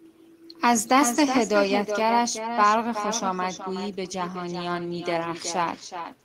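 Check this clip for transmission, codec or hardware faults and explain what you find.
One fault runs through the whole speech clip: echo with no canceller. Every phrase returns roughly 0.4 s later, about 8 dB quieter. The far end's loudspeaker feeds its microphone, and nothing subtracts that pickup. So the talker's own voice travels back across the network. It trails each phrase as a thinner copy.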